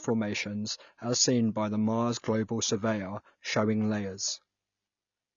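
From start to finish the speech sounds dull, with nothing above about 6.9 kHz. Sibilants and sustained vowels carry a warbling, fizzy texture. The cause is likely AAC compression, with the band-limiting and smearing pointing to AAC-LC at a low bitrate, around 24 kbps. A plain low-pass filter would also cap the top end, but it would leave the remaining sound clean. Here the quantisation causes audible swirling.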